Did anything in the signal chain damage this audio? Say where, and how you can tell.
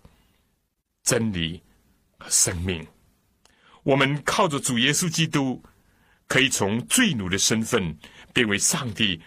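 No, nothing along the chain has audibly damaged this speech recording, and the signal reaches the listener intact at every stage.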